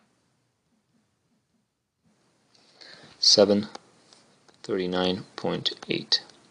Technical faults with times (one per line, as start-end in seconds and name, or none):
none